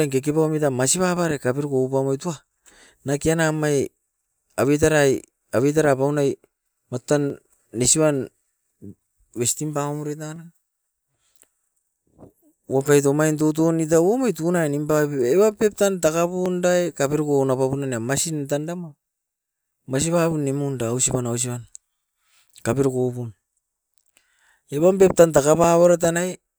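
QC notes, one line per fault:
1.17–25.64 s, clock drift buffer slips: two devices likely run on separate clocks about 200 ppm apart, so the buffer between them drifts until roughly 30 samples are dropped or repeated every 3.06 s, giving about ten evenly spaced clicks through the speech.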